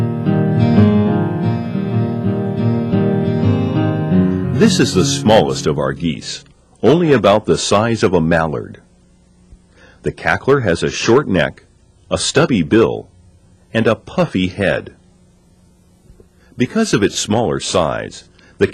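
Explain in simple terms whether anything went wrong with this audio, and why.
The loudest moments were pushed past what the recording could hold, so their peaks were sliced flat. That is hard clipping. It causes brief crackles on peaks throughout.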